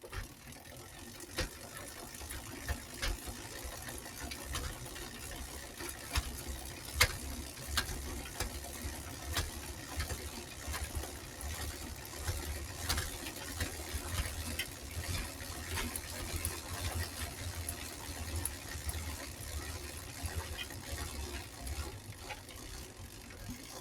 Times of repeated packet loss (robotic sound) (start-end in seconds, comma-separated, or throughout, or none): none